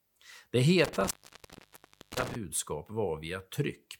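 At 0.85 s the speech drops out abruptly. This is an intermittent contact fault. A loose cable or plug has lost its connection, so the signal path breaks. A burst of crackle marks the moment the contact opens. While the line is open, only a faint hiss remains. The break lasts about 1.01 s. The disturbance runs until 2.35 s, when the contact closes again with more crackle and the speech returns.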